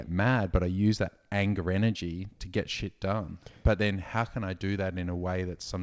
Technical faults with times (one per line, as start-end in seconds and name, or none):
0.00-5.83 clock drift between sender and receiver
0.22-5.41 repeated timing corrections